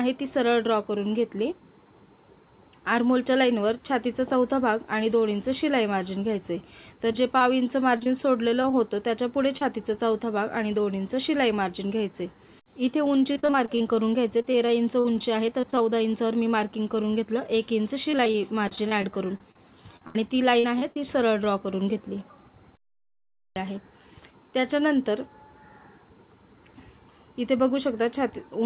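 Between 7.12 and 8.73 s come scattered short gaps: about seven brief holes, the longest around 20 ms, together roughly a tenth of a second and about 7% of the stretch. Each lost or late piece was patched by extending the preceding sound, so they surface as isolated ticks and tiny hiccups. Because they are spaced out, the sound never turns choppy. The audio stays band-limited below 4 kHz, as a narrowband call codec such as G.711 A-law would leave it.

At 9.57 to 9.62 s there is a single short concealed packet loss. About 30 ms never arrived, and the receiver bridged it with 33 ms of continued sound before blending back into the real audio. It is heard as one brief smear or wobble. Unlike the earlier cluster, it stands alone, with nothing nearby to form a pattern.

Repeated packet loss (robotic sound) runs from 13.33 to 15.81 s. Sixteen gaps, the longest 47 ms, add up to 333 ms of patched sound, about 13% of the span. 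It returns from 18.11 to 20.97 s with seventeen gaps, the longest 69 ms, totalling 421 ms or about 15%. Here the holes follow one another so closely that the concealment never settles. The result is a choppy texture with pieces dropped out, rather than the occasional ticks heard earlier.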